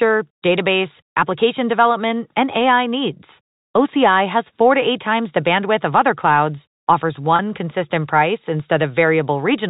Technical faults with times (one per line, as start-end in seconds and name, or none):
7.36-7.39 packet loss with pitch repetition